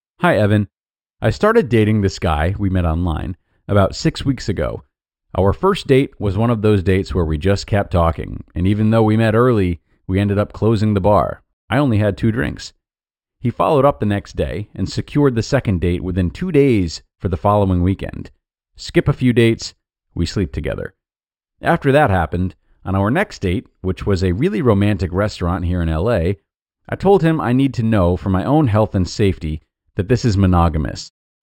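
Throughout the speech, imaging from linear upsampling leaves faint mirror images between 6 and 12 kHz, about 30 dB down. This fits a straight-line rate rise from 12 kHz to 48 kHz. The images add a metallic shimmer to sibilants, and unlike aliasing, they sit above the dulled original band rather than folding down into it.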